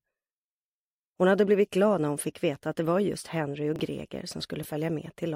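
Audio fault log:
3.76–3.80 s and 4.63–4.65 s, chunks out of order: a 10 ms chunk of audio was delivered late and played after the material that should have followed it, about 30 ms behind the first time and 10 ms behind the second. Nothing is missing, but the shuffled order leaves a brief jumbled stutter, with hard joins where the misplaced chunk is spliced in.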